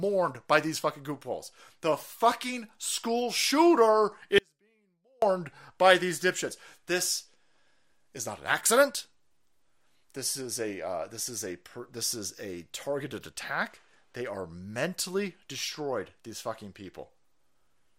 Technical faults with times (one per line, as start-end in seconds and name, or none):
4.38-5.22 audio dropout to a faint residue